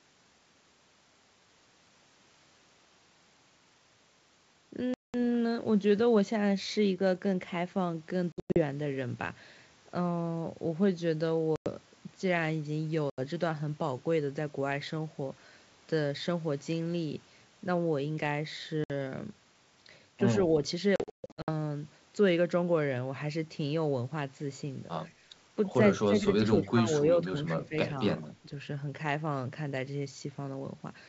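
Packet loss on an ADPCM call breaks the speech six times: 4.94 to 5.15 s (200 ms missing), 8.32 to 8.62 s (200 ms lost in scattered pieces over 240 ms, the longest 100 ms), 11.56 to 11.70 s (100 ms), 13.10 to 13.20 s (80 ms), 18.84 to 18.91 s (60 ms), and 20.96 to 21.51 s (380 ms lost across 520 ms, longest gap 140 ms). Each hole is filled with silence. Because the decoder's adaptive predictor and step size no longer match the sender's, the speech comes back slightly distorted for a brief stretch. On the waveform these look like flat, hard-edged gaps. The spectrogram shows blank vertical columns.

At 25.10 to 25.21 s there is background gated by the echo canceller. While the loudspeaker plays, the canceller clamps the microphone and the room sound dips by about 8 dB for roughly a tenth of a second, then returns. The waveform shows a shallow notch in the noise floor. On the spectrogram the background band thins briefly across all frequencies.

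Speech suppressed in double talk follows at 26.06 to 26.75 s, 27.55 to 27.75 s and 28.24 to 28.44 s, likely because the far side was talking at the same time and the canceller ducked the near talker. The first dip reaches roughly 15 dB and affects about 400 ms in pieces. The later two are shallower, near 10 dB. The waveform envelope sags in chunks and the spectrogram loses energy. The upper band extends toward 7 kHz under the 64 kbit/s G.722 wideband coding.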